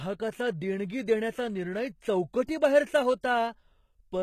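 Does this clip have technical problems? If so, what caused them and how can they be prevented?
Yes. Throughout the speech the upper frequencies sound gritty and metallic, with s sounds coming out lispy, and nothing is heard above about 14.9 kHz. This is likely HE-AAC compression at a very low bitrate, on the order of 20 kbps, where only the lower spectrum is properly coded and the treble is rebuilt by copying lower bands upward, so its harmonics no longer match the real ones. To prevent it, encode at a higher bitrate with plain AAC or another full-band codec.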